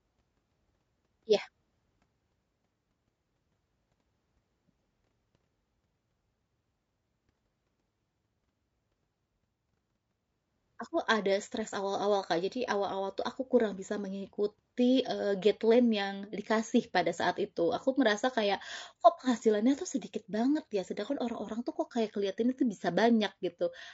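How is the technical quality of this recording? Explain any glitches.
The quality is compromised throughout by low-delay AAC compression. Speech sounds rough and grainy the whole way through, likely from AAC-ELD coding. Its short frames blur pitch harmonics, consistent with about 32 kbps.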